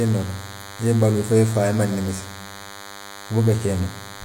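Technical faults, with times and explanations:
Throughout, DECT cordless phone buzz: a steady, thin buzz rich in harmonics sits under the speech, well below it at roughly 20 dB down. A nearby DECT handset or base fires a radio burst every 10 ms, which the audio circuitry rectifies into a 100 Hz pulse train.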